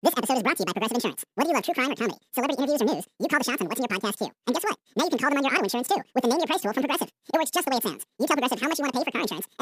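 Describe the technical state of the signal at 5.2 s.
At 5.2 s the audio is being read two samples at a time (double speed): the reader treats each pair of samples as one frame, so the speech runs at 2x speed and an octave high throughout.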